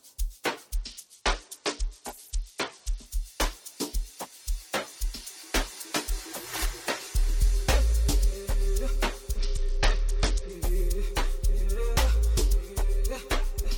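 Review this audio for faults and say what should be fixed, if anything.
Bluetooth SBC bit pool drop occurs from 0.75 to 3.06 s and from 9.37 to 10.52 s. Treble dulls and gritty noise rises. Upper sub-bands lose their bits, which fits a bit pool falling from 28 to 9, near 78 kbps. Prevent it by reducing link congestion and interference.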